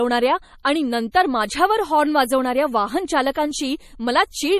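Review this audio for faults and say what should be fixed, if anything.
Throughout, the speech has a watery, swirly quality with clearly audible damage and nothing above 14.8 kHz. This is likely MP3 compression at a low bitrate, something like 40 kbps. Starved of bits, the encoder cuts the treble and drops weak spectral lines that flicker between frames. Encoding at a higher bitrate, or keeping a lossless master, would prevent it.

At 1.12 to 1.14 s, just before "माझ्यावर हॉर्न वाजवणाऱ्या", and again at 3.31 to 3.35 s, a short hiss arrives about 27 ms and 37 ms before sharp onsets, softening them. This is pre-echo: quantisation noise sized for the loud attack spreads back across the quiet start of the transform block. A higher bitrate, or an encoder that switches to short blocks on transients, would prevent it.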